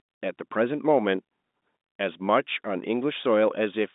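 No faults are present; the speech sits in a normal telephone band of roughly 200 Hz to 3.7 kHz with nothing above 3.8 kHz, as expected of 64 kbps mu-law G.711 line coding.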